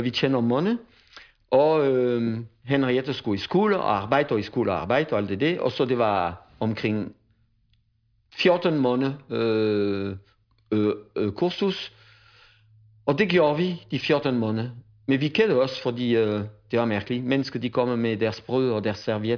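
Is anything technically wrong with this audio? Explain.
No, nothing in this speech recording stands out as a technical problem.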